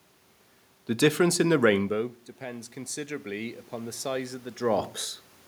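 Automatic gain rising from 1.89 to 4.43 s, just after "difference in the", in this speech clip: the input falls by about 16 dB as the talker moves back, and the gain control slowly adds about 5 dB, swelling voice and room noise together.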